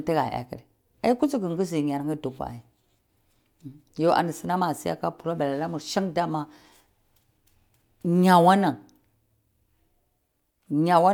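No technical faults are audible in this speech recording.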